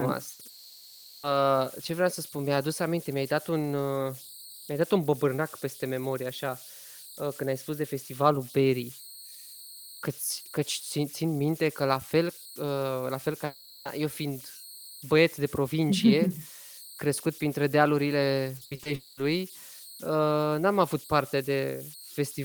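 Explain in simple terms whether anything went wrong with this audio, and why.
Converter idle tones run through the whole 22-second recording as a high whistle around 4 kHz, most noticeable in pauses and under quiet speech. The converter that turned the sound into digital data was not fed the small random noise that normally breaks up its patterns. When the input was very quiet, it repeated the same bit sequences, and those repeats came out as a steady tone.

A burst of packet loss hits at 0.33 to 0.41 s. A short run of the audio's data chunks never arrived in time. The player filled the hole, about 60 ms, by stretching out the last sound and letting it fade, then carried on later in the speech. That stretch of speech is simply missing, replaced by a brief held buzz or hiss.

A long network dropout shows up three times: at 0.49 to 1.25 s, 13.45 to 13.87 s, and 18.95 to 19.19 s. In each, the speech is replaced by a drawn-out, fading continuation of the last sound, lasting about 740 ms, 400 ms and 220 ms. 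The filler never drops to silence. The cause is likely the connection stalling so that no audio arrived. When sound returns, it picks up further along, skipping what was lost.

Repeated packet loss (robotic sound) affects 18.57 to 18.87 s, just before the third dropout. Four separate holes, the longest 60 ms, were each patched by extending the previous sound, so about half of that moment is filler. The quick stop-start patching gives the speech a choppy quality, with bits of it missing.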